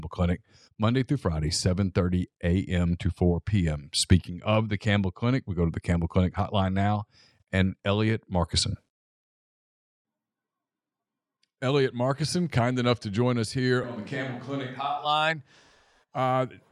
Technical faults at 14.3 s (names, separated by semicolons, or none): switch to a distant microphone